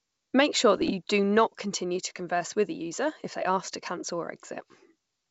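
From 0.77 to 0.91 s the speech breaks into pops and a rough, gritty burst with brief jumps in level. These are bit errors on an ADPCM link, here the G.722 path, at about 0.3 percent. Each flipped bit throws off the decoder's step size and prediction, so the damage rings on briefly.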